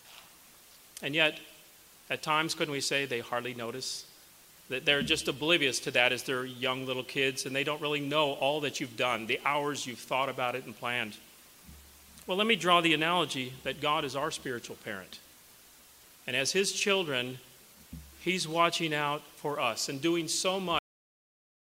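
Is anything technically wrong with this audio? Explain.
Yes. At 20.79 s the audio has a cut-off end: the final buffers were never written or played, so the sound stops mid-event and drops straight to digital silence with no decay. That silence runs to the end of the clip.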